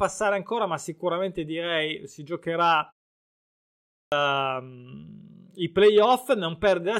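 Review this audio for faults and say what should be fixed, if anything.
Speech at 3.69 s bursts in with its first 0.43 s gone after a 0.85 s pause. This is a clipped start after a pause, caused by a slow-waking output device. Disabling the output's power saving, or keeping it fed during silences, would prevent it.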